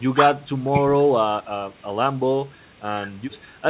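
A speech recording carried over a G.711 A-law call at 64 kbps, with content stopping at 4 kHz as that narrowband codec gives, and nothing technically wrong with it.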